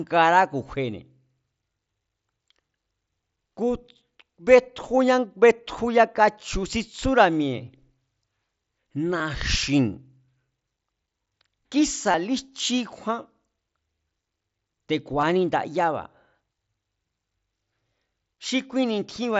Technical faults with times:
9.18 concealed Bluetooth headset packet loss
12.12-12.14 concealed Bluetooth headset packet loss
15.21-15.23 concealed Bluetooth headset packet loss

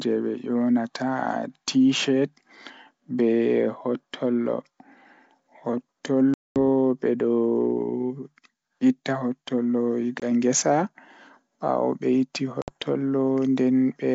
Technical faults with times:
6.34-6.58 packet loss on an ADPCM call
10.20-10.26 packet loss on an ADPCM call
12.62-12.71 packet loss on an ADPCM call

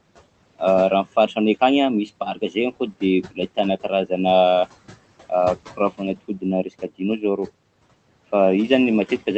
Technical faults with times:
0.00-9.37 noise suppressor artifacts
2.34-2.56 speech cut by the noise suppressor
3.23-3.39 speech cut by the noise suppressor
5.70-7.49 speech cut by the noise suppressor

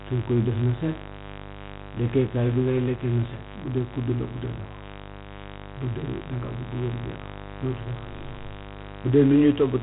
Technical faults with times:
0.00-9.83 mains buzz
0.00-9.83 4-bit ADPCM compression

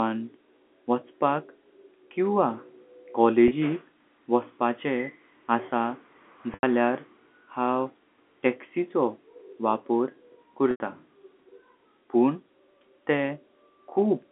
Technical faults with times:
3.48-3.51 packet loss with pitch repetition
6.54-6.63 packet loss with pitch repetition
10.71-10.80 packet loss with pitch repetition

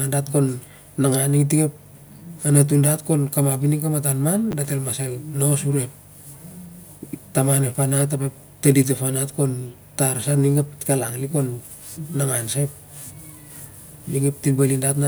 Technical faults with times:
4.51-4.53 chunks out of order

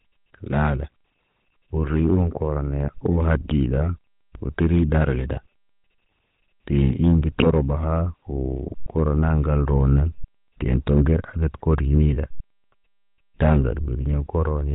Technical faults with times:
0.00-14.75 GSM full-rate codec
7.40-7.47 GSM bit errors
11.57-11.63 GSM bit errors

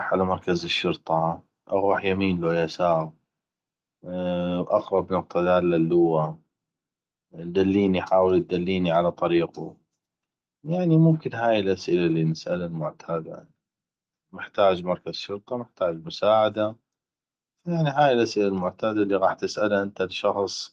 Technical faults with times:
none

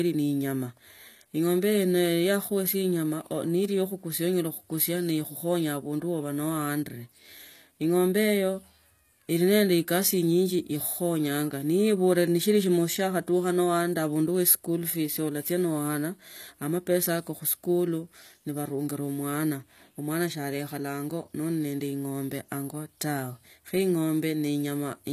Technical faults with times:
0.00-25.12 HE-AAC compression

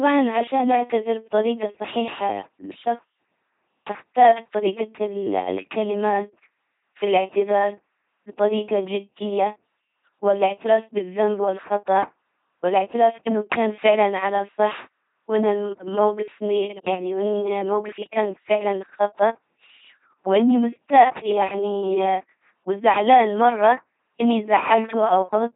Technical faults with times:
0.00-25.55 LPC-10 vocoder

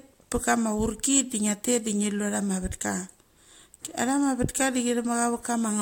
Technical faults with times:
none

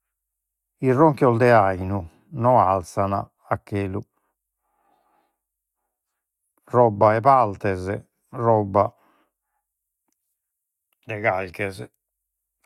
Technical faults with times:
none

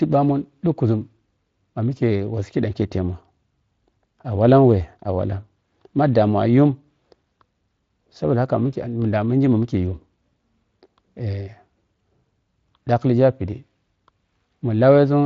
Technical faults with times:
none

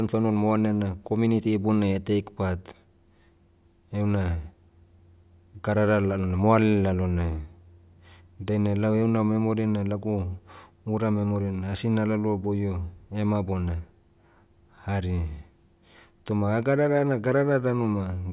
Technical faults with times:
none

